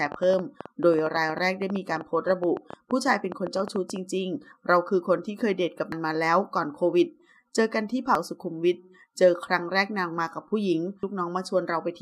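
Something, likely nearby interference or a faulty connection, injects a train of clicks from 0.06 to 3.97 s: roughly forty irregular pops, about 9.5 per second, peaking around 5 dB above the sound. Damaged data in the compressed stream makes the decoder lose sync and hunt for the next frame, leaving brief chirps or blips at 5.92, 8.15 and 11.03 s.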